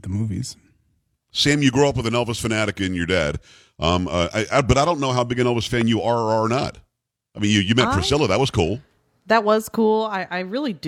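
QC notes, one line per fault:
5.81–5.83 s, loud pop: one sharp pop, roughly 10 dB above the speech, which continues underneath. Likely a brief voltage spike from static or a switch.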